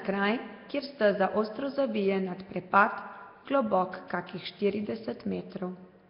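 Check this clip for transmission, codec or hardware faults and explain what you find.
One codec fault runs through the whole clip: Nellymoser compression. From start to finish the speech has a rough, hissy halo and a smeared, underwater quality, with nothing above about 5.3 kHz. This is likely the Nellymoser Asao codec, which fits a bitrate near 22 kbps. At that rate it spends very few bits on each short block and fills weak bands with noise instead of real detail. On a spectrogram, energy stops sharply at 5.3 kHz, with grainy, speckled noise filling gaps between harmonics.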